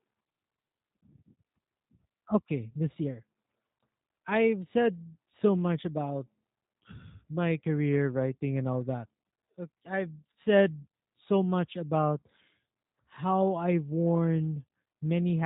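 From start to finish the speech has passed through a G.729 codec, most likely the G.729A variant at a rate consistent with 8 kbit/s. Instead of keeping the waveform, the codec models each short frame as a vocal tract filter, a pitch predictor and a handful of pulses, then resynthesises it. Nothing above about 3.8 kHz survives, so the sound is dull and boxy, and the rebuilt excitation gives it a plainly audible rough, buzzy, synthetic edge.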